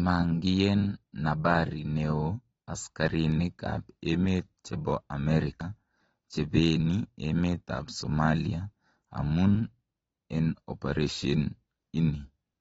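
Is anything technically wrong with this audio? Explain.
Yes, the speech carries AAC compression damage all the way through, likely from a low-bitrate AAC-LC encode, around 24 kbps judging by the sound. Nothing survives above about 7.7 kHz, so it's dull, and starved bands give sibilants a smeared, fizzy, warbling edge.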